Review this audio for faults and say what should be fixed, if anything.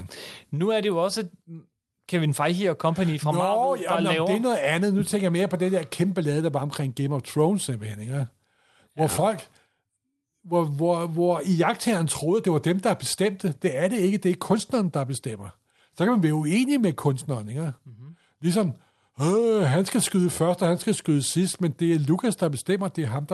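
Nothing to fix: the speech runs through an Opus call path whose coding holds the top end to about 12 kHz, as expected for that link.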